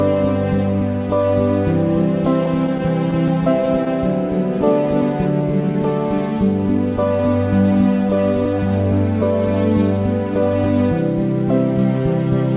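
From 2.46 to 3.88 s, scattered short gaps: roughly seven tiny packet losses, each around 10 ms, were concealed by extending the preceding sound. They leave brief ticks and smears, visible as thin vertical seams in the spectrogram. From 4.58 to 5.74 s, a jitter buffer slow-down repeats single pitch cycles to add 75 ms. The sound plays at 94% speed with unchanged pitch, and the waveform shows near-identical periods copied back to back. Throughout, the narrowband call path leaves the spectrogram empty above 4 kHz.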